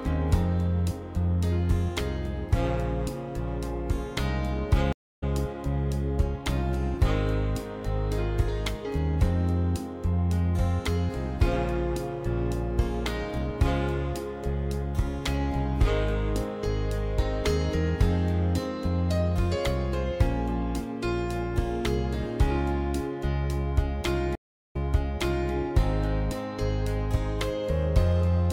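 Two stream reconnects, where the connection dropped and a fresh decoder picked up mid-stream. At 4.93 s there's 0.28 s of silence, then the audio skips ahead about a fifth of a second. At 24.35 s a 0.38 s gap jumps back 0.78 s, replaying a bit.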